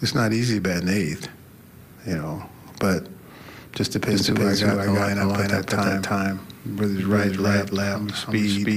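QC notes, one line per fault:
4.12 s to the end, doubled audio track: from here a second full-band copy trails the original by roughly a third of a second at about the same level, with no decay or room colour, and it cuts in abruptly, likely a second capture path or misaligned edit.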